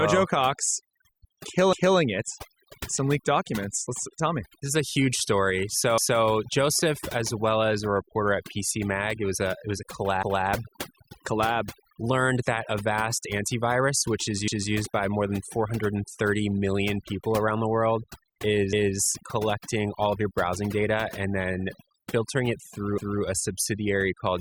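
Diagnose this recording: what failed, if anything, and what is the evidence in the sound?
Throughout, the background sits at near silence but is dotted with twinkling, chirpy specks, and the speech has its quieter components hollowed out. This is overdone noise removal at the call-processing stage. A suppressor set far too aggressively is pulling individual frequency bands down, or off entirely, whenever they come close to its noise estimate. The low-level parts of the speech fall under that threshold and are removed along with the noise.

At 1.73, 5.98, 10.23, 14.48, 18.73 and 22.98 s there is a stutter, with a short stretch of audio heard twice. Each repeat lasts about 250 ms, and the joins recur every 4.25 s. This is overlapping chunks at the buffering or chunked-processing stage. The audio is handled in 4-second pieces, and each piece begins 250 ms before the previous one ended. That overlap gets played out rather than crossfaded or trimmed, so a quarter-second of sound doubles at every join.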